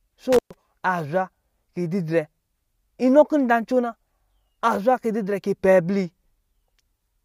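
From 0.33 to 0.54 s, just before "aa zwa kii", the speech crackles, then drops out for about 120 ms, leaving only faint hiss before it returns. This is an intermittent contact: a loose plug or cable briefly opened the signal path.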